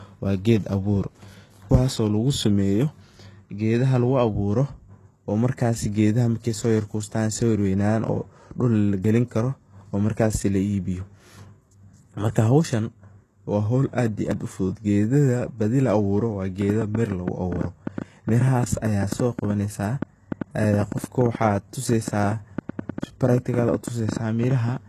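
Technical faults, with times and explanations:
Throughout: HE-AAC compression. Nothing is present above 12.3 kHz, and the treble has a gritty, synthetic edge because it is likely rebuilt from copied lower bands rather than coded directly. The damage is plainly audible, which fits a low bitrate near 16 kbps.
14.32 s: dropped buffer (overrun). The sound jumps suddenly where roughly 70 ms of speech vanishes without any gap of silence, probably because samples were overwritten before being collected and the surviving edges were spliced together.
16.62 to 24.69 s: train of clicks. Around seventy similar sharp ticks arrive at an irregular pace of about 7.4 per second, peaking about 10 dB above the speech and audible in pauses too, most likely from interference or a faulty connection injecting pulses.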